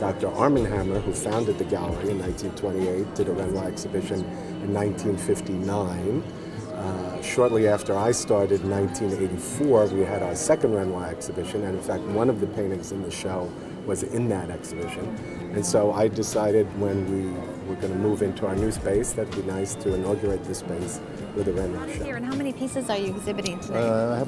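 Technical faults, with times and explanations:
No technical faults can be heard anywhere in the recording, so there is nothing to list against any time.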